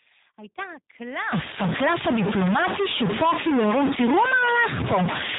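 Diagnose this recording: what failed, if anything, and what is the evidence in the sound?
G.729 codec throughout, at the codec stage: the whole clip has no energy above about 3.8 kHz and a plainly rough, synthetic texture. That fits an 8 kbit/s link that rebuilds speech from a vocal tract filter, a pitch predictor and sparse pulses per 10 ms frame.

Stuck bit from 1.32 s to the end: distortion rides on the speech, and the pauses fill with noise instead of falling quiet. The likely cause is one data bit held fixed at the converter or its wiring, so about half the samples are offset by that bit's weight.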